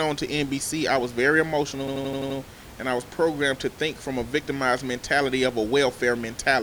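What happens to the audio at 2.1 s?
At 2.1 s the system has frozen: this is a system hang loop, running from 1.88 to 2.39 s, where the audio hardware keeps replaying the same ring buffer while the driver stalls. Right after "I was very", one 85 ms slice, which fits a 4096-sample buffer, repeats six times at about 11.7 Hz, giving a machine-gun stutter before the sound resumes with "and I was programmed", with essentially nothing skipped.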